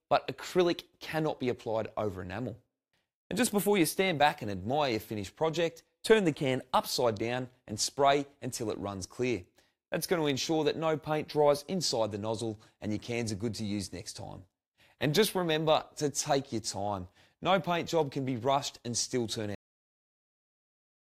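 Cut-off end at 19.55 s: the sound stops abruptly mid-event and the final stretch, about 1.5 s, is flat digital silence. There is no fade, release or room decay leading into it. The sound is simply there one instant and absent the next. What happened is that the last portions of audio were never written out or played back, so the recording ends before the material itself did.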